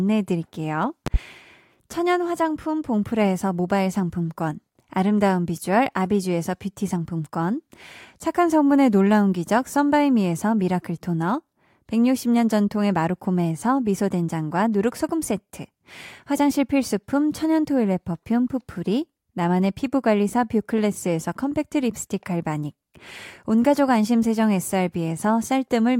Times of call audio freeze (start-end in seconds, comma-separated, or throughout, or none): none